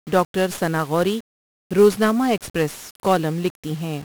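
A speech clip that sounds fuzzy and crackly from start to finish, with its treble buried under broadband hiss. This is heavy 1-bit DFPWM compression: each sample is reduced to a single up-or-down step of an adaptive level, which fits a stream of about 48 kbps.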